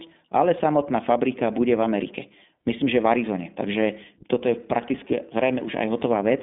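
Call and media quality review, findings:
iLBC codec artefacts, whole clip: speech band-limited to roughly 200 Hz–3.6 kHz, nothing above 3.8 kHz; rough, synthetic texture, plainly audible. Each 20 ms frame coded independently, fits 15.2 kbps mode. Spectrogram: hard ceiling below 4 kHz, empty upper band.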